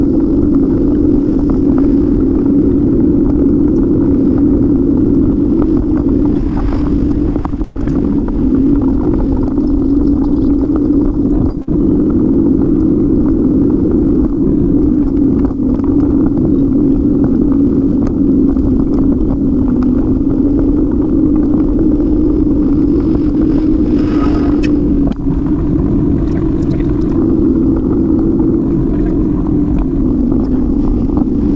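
At 7.64 s and again at 11.62 s there is a burst of packet loss. Each time the receiver stretches the last sound to cover the hole, about 113 ms and then 54 ms, giving a held, fading buzz or hiss before the audio resumes with roughly 120 ms and 60 ms skipped. A spectrogram shows smeared, repeated bands dimming to 7.86 s and 11.78 s. Throughout, the call codec leaves nothing above 8 kHz, consistent with G.722 at 64 kbps.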